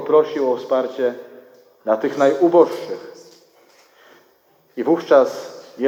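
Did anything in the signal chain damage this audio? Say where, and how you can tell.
No, no signal-chain damage audible.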